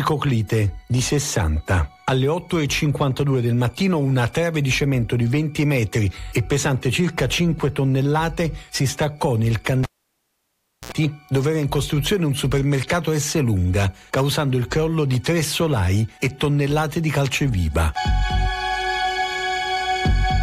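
A cable pulled and plugged in at 9.83 s: pop, about 1.04 s of near silence, a 73 ms burst of 60 Hz mains buzz as the tip reconnects, then a second pop at 10.92 s.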